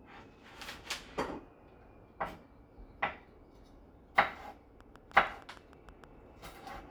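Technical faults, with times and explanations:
4.81–6.05 s, train of clicks: about ten regular ticks at 6.5 per second, peaking roughly 5 dB above the sound, likely from nearby interfering equipment; thin vertical spikes evenly spaced.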